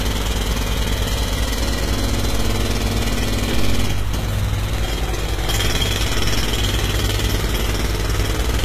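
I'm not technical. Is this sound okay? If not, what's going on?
No. From start to finish the treble sounds gritty and metallic, and nothing is present above about 14.9 kHz. This is likely HE-AAC compression: it keeps the lower range and fakes the top end by copying lower bands upward, so the brightness isn't genuine.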